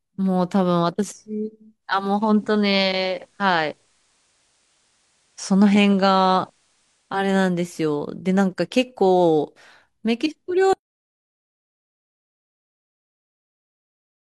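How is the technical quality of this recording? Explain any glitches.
The recording has two faults. From 1.80 to 7.36 s, a digital radio blending to analogue: the receiver lost its digital stream and cross-faded over 440 ms to FM, bringing faint hiss roughly 45 dB down and a level shift of about 1 dB. From 10.73 s to the end, an audio dropout to silence, likely from a lost input, leaves the speech cut off into silence with no room tone.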